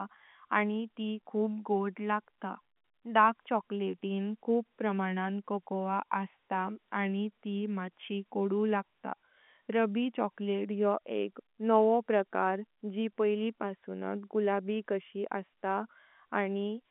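Speech carried over an ordinary G.711 telephone coding path, with the band running from about 200 Hz to 3.5 kHz, nothing above 3.8 kHz, and only the faint, level-following quantisation noise expected of a 64 kbps A-law line, so nothing in the signal is technically wrong.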